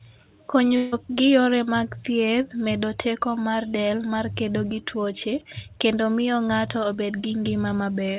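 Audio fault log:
0.76–0.94 s, long network dropout: for 160 ms the sound becomes a smeared buzz continued from the preceding audio, never falling to silence, then resumes with that stretch missing. It is likely a run of lost packets, too long for a single concealed frame to hide.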